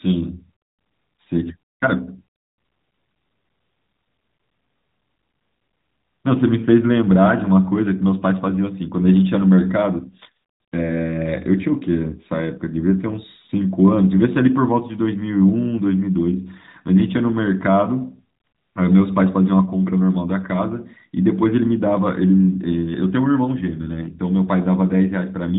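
Speech, carried over an AMR narrowband mobile codec path with nothing above 3.8 kHz; no faults found.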